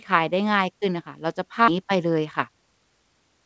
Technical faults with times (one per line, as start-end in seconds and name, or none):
1.68-1.70 skip ahead
2.25-2.72 jitter buffer speed-up